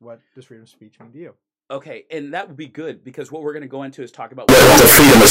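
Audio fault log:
4.49–5.31 s, float read as integer: right after "to go into is", the sound jumps to a harsh, blaring level and stays there to the end. The waveform is flattened into something close to a square wave sitting at a nearly fixed, high level, and the background noise comes up as loud as the speech itself. The pitch contour still carries through. This points to 32-bit float samples likely being interpreted as 32-bit integers, so the sign and exponent bits end up setting the amplitude.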